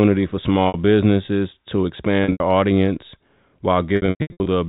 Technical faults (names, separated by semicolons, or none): packet loss with pitch repetition